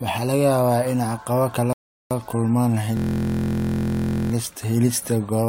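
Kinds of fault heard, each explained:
Rebuffering stall: The speech cuts to silence from 1.73 to 2.11 s while playback waits for more data, then picks up exactly where it stopped. About 378 ms of dead air is inserted and nothing is skipped, which distinguishes it from a dropout, where audio goes missing and the sound jumps ahead. The gap is clean silence with no repeated or garbled sound inside it.
System hang loop: Right after "kala kulmaan", from 2.97 to 4.32 s, one 23.22 ms slice of speech repeats 58 times in a row. Because the output hardware keeps replaying the same ring buffer while the system is frozen, the result is a steady buzz at 43.1 Hz, consistent with a 1024-sample buffer. Unlike the stall, the gap is filled with a rigid repeating fragment rather than silence, and essentially no speech is lost.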